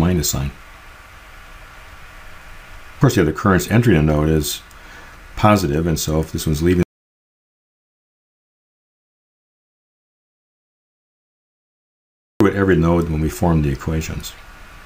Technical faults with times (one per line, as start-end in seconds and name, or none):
6.83-12.40 audio dropout to silence